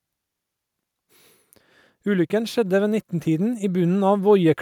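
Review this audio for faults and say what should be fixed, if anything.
The automatic gain control judged the input too quiet and began raising its gain from 2.03 s, climbing steadily until 4.57 s, a rise of about 6 dB over roughly two and a half seconds. Because the gain acts on the whole signal, the speech and the background noise swell together, so the room sound creeps up under the voice rather than the voice alone getting louder. To prevent this automatic gain rising, set a fixed input gain with adequate level, or slow and cap the AGC's upward correction.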